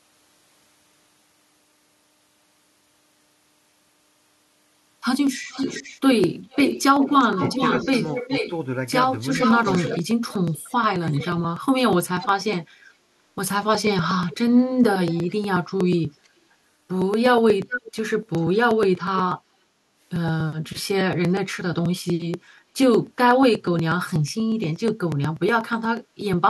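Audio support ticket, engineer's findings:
Periodic USB or driver dropouts, 0.06–26.33 s: regular ticks every 0.121 s, only during signal. Roughly 4 ms skipped each time, about 200 in all. A background task is stalling the bus or audio driver.

Echo leak, 5.49–12.27 s (419 ms delay, about 5 dB below speech), 14.29–16.28 s (434 ms, about 20 dB below), 17.69–19.22 s (441 ms, about 10 dB below): delayed copy of the far talker. Likely an incomplete cancellation at the loudspeaker end.

Speech suppressed in double talk, 7.35–8.42 s: brief shallow dips, about 5 dB, some 70 ms total. At 9.9–11.86 s: deep cuts near 30 dB, about 1.5 s total. Likely the canceller confused talker with echo.

Background gated by the echo canceller, 19.74–19.86 s: room sound dips about 6 dB for roughly 100 ms, then recovers. The canceller clamped the microphone during far-end playback.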